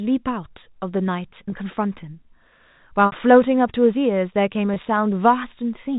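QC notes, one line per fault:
1.50–1.52 s, 3.06–3.12 s, 4.74–4.76 s: packet loss with pitch repetition. Audio drops out three times in this speech: 20 ms at 1.50 and 4.74 s, which fits one lost packet each, and 60 ms at 3.06 s, which points to about three consecutive packets. The receiver fills each hole by replaying the last pitch period. The short gaps sound like a briefly held, buzzy tone. At 3.06 s the repeated cycle fades toward silence before the speech cross-fades back in. The telephone-band G.711 coding beneath adds at most a faint quantisation noise of its own.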